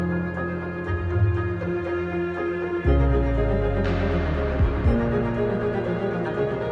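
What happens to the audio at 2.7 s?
Nothing goes wrong at 2.7 s: the music plays straight through that moment with no dropout, click, distortion or other fault.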